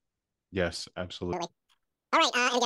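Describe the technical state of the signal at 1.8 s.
At 1.8 s the audio is inside a wrong sample rate fault running from 1.33 s to the end at 2.65 s. The samples play back twice as fast as they were captured, which fits 24 kHz material clocked out at 48 kHz without conversion, so the sound runs at double speed and a full octave (12 semitones) high. On a spectrogram, every partial sits at twice its frequency with doubled harmonic spacing, and the waveform's envelopes are squeezed to half their length.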